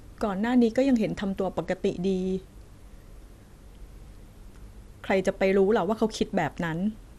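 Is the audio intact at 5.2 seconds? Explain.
No. From 5.10 to 5.29 s the sound is disturbed by DAB burbling: short blips of noise riding over the signal. Under weak reception, a small share of bit errors has slipped past the error correction into the audio data, corrupting sample values so that short blips of noise appear in single sub-bands. The run of hits across this fifth of a second matches several consecutive corrupted frames.

Underneath, the audio at this point is dull, with a gurgling, granular edge. This is likely MP2 compression. MPEG Layer II divides the spectrum into 32 equal sub-bands and shares out a limited bit budget among them. When bits are scarce, the upper bands drop out and flicker, and the remaining bands are coarsely quantised. The plainly audible damage fits a stream at about 80 kbps.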